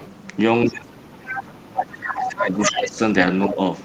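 A faint second voice sits under the opening, from 0.00 to 0.08 s, about 25 dB below the main speech. This is the other side's voice leaking through. It most likely comes from the far end playing on the talker's loudspeaker and reaching the microphone, with the echo canceller failing to remove it fully. The same leak returns louder while the talker is being ducked: at 1.35 to 1.43 s and 2.22 to 2.39 s, about 10 dB below the speech, and at 2.62 to 2.79 s, only about 5 dB under it.

From 0.68 to 3.01 s the talker's speech sinks and breaks up in pieces, dropping by as much as about 25 dB, for roughly two seconds in total. This is speech suppressed in double talk. The likely cause is both sides talking at once, with the echo canceller unable to tell the talker from the loudspeaker echo and so turning everything down. A shorter, shallower dip of about 5 dB follows from 3.48 to 3.60 s.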